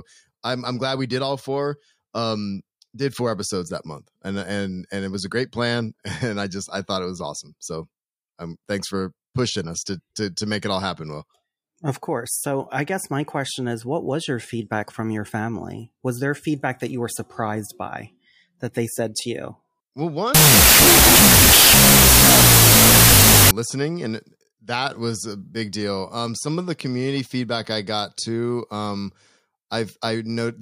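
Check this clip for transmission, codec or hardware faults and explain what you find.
One fault, a wrong sample width, from 20.35 to 23.51 s. Loud harsh noise buries the speech, which plays at half speed and lower pitch. This fits 32-bit float samples being read as 16-bit integers, which scrambles the bytes.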